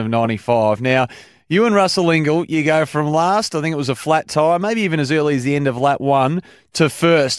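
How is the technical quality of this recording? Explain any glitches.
Technically sound: nothing in the recording registers as a fault, so there are no glitches to explain.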